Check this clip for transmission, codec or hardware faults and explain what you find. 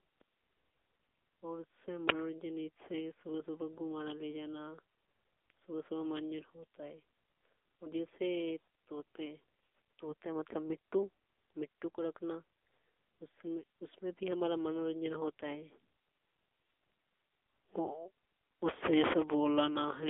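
Two faults are present: one runs through the whole clip, and one is a brief event.

The AMR narrowband mobile codec is active throughout. The speech sits in a 300 Hz to 3.5 kHz telephone band, with nothing above 3.8 kHz. The codec rebuilds the voice from a vocal-tract model and sparse pulses. The plainly audible buzzy, synthetic texture fits a low mode near 8 kbps.

An uninitialised buffer bursts out at 2.09 s, between "और उससे" and "जैसे सुबह". Audio was played from memory before anything was written to it. The leftover values come out as a sharp, loud crack of digital noise lasting about 10 ms, which fits a 512-sample buffer.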